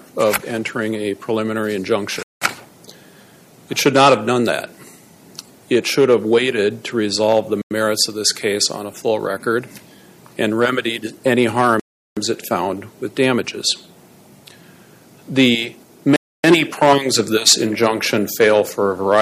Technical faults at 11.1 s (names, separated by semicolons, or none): none